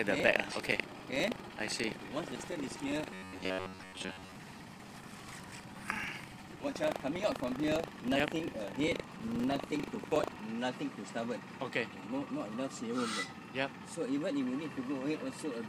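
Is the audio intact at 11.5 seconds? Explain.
Yes, at 11.5 seconds the audio plays through intact, with no dropout, click, distortion or other fault at that point.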